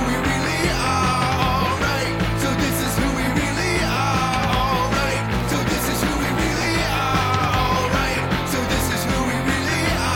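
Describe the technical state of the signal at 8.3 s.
At 8.3 s the signal is intact, with no dropout, distortion, glitch or other fault to be heard.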